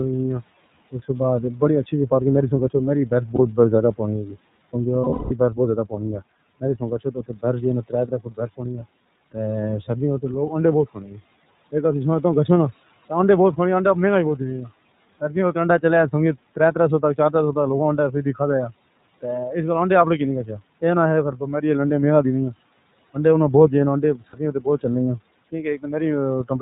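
Throughout, the iLBC codec cuts everything above 4 kHz and leaves a rough, synthetic edge, which fits its 13.33 kbps, 30 ms frame mode. Lost iLBC frames at 3.35–3.40 s, 5.01–5.32 s and 24.30–24.35 s are filled with a held, buzzy vowel that recovers at once. They sound like a sustained tone, fading over the longer run at 5.01–5.32 s. Speech cut by the noise suppressor at 4.25–4.36, 7.89–8.60, 10.94–11.16, 18.12–18.40 and 24.17–24.84 s pulls soft sounds down by up to about 14 dB, leaving them swallowed rather than replaced.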